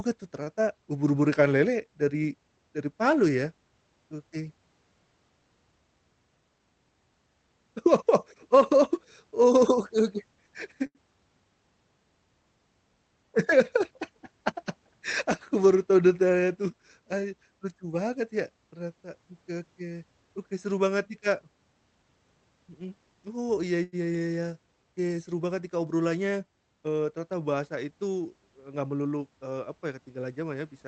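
At 0.43 s, the speech through this Opus call path (which rolls off above about 8 kHz) hangs briefly in a short stall from a late packet. A packet came in after its slot, the jitter buffer ran dry, and the last sound was stretched for 34 ms until playback resumed where it had stopped. Longer stalls follow at 10.86 s (85 ms) and at 23.83 s, right after "oh iya" and before "iya iya" (95 ms). Each is a held sound rather than a gap, and no speech is lost, unlike packet-loss concealment.

A jitter buffer speed-up runs from 16.70 to 17.10 s, just after "baru tahu detailnya tuh". The buffer had grown beyond its target, so the receiver trimmed out pitch-period-sized slivers in quick succession, roughly 70 ms in all, and the speech plays at about 113% speed. It happens again from 28.56 to 29.13 s, between "bahasa itu" and "eee apa", at 112%. The pitch stays put, so this sounds hurried rather than chipmunk-like, which separates it from a resampling error.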